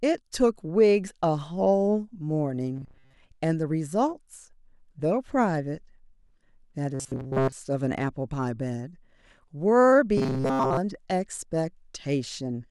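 Audio likely arrived too seldom, so chunks of about 7.5 ms were replayed for most of each stretch. The result is robotic sound from repeated short buffers, a rigid metallic buzz at 133 Hz, at 2.76–3.14 s, 6.95–7.52 s and 10.17–10.78 s.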